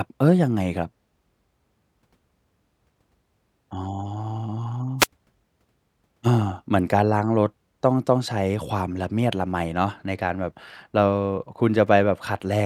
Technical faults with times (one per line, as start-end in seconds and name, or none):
4.99-5.07 wireless microphone noise hit